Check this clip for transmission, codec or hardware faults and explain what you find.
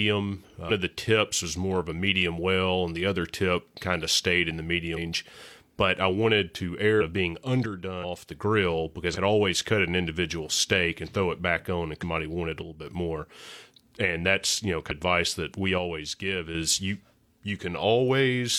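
Two faults recur in this speech: compressed frames skipped and one channel drops out.

Compressed frames skipped at 0.65, 4.93, 6.97, 7.99, 9.11 (just before "always cut an individual"), 11.99 (between "it back on and" and "wanted a") and 14.86 s (after "that's you know"). Whole 46.4 ms frames never play, so the speech jumps ahead by roughly 150 ms to a full second.

One channel drops out from 7.66 to 8.31 s, 12.62 to 12.87 s and 15.78 to 16.55 s. The level falls abruptly by about 6 dB, likely because one stereo channel went silent before the mono sum.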